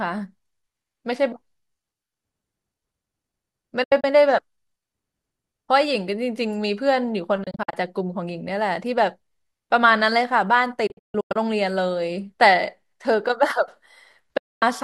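Digital broadcast dropouts hit at 3.83–4.04, 7.43–7.74, 10.87–11.36 and 14.37–14.63 s. The receiver lost frames and muted, so the speech vanishes in quick-faded holes, and that audio is gone.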